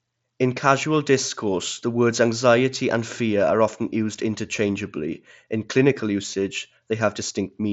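The speech comes through a wideband Bluetooth headset link using the mSBC codec, with content reaching up to about 7.7 kHz and nothing above it, and no technical faults are present.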